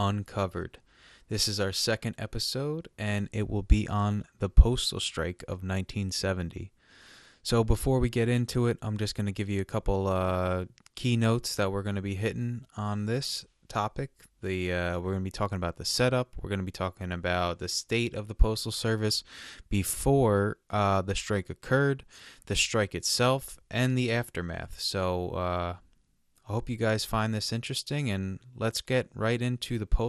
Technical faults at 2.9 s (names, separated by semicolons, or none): MP2 compression